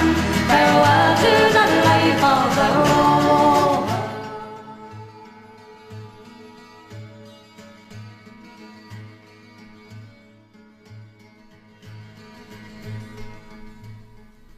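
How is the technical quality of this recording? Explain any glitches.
No glitches can be heard anywhere in the recording. Where the level rises or falls, it moves smoothly like a fader being eased, with no jumps or steps.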